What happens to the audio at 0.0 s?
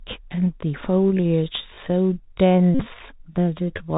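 From the first instant the speech sounds narrow and muffled, with scratchy s sounds and a grainy hiss beneath it. This is the Bluetooth CVSD headset codec, present throughout, which fits a 64 kbps stream: each sample is one up-or-down bit with an adapting step, so nothing above 4 kHz survives and fast, loud high detail outruns the step and distorts.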